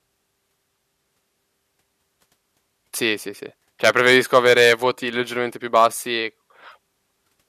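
No technical faults can be heard anywhere in this speech recording. There is nothing to place on a timeline.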